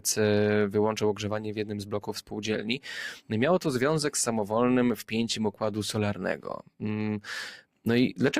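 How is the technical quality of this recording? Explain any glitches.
The technical quality is compromised by a speech-oriented processor left running on non-speech material.

Throughout, a noise suppressor applied to music or sounds treats steady tones, ambience and decay as noise, so level swings by around 10 dB. Attacks pass while sustains sink, giving a pumping, thinned sound. A spectrogram shows sustained bands fading unevenly.

From 1.14 to 2.46 s and from 6.14 to 6.83 s, sound is cut by the noise suppressor, dipping about 10 dB as held material is mistaken for noise. Held sounds sink or their tails are cut short. The waveform envelope dips there, and the spectrogram thins to transients.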